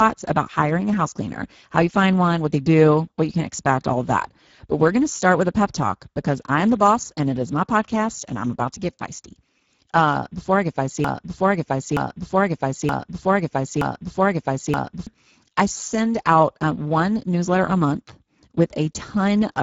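From start to finish the speech sounds hoarse and grainy, with nothing above 7.6 kHz and a noise-like fill in the upper band. This is Speex codec damage, plainly audible and consistent with a low-bitrate setting near 10 kbps starving the excitation.

After "before I get", from 11.04 to 15.07 s, a 0.92 s fragment repeats exactly four times back to back before "I send out um" resumes. This broken-record loop was likely caused by a stalled player or stream resending its last buffered piece, and the speech due in that span is lost.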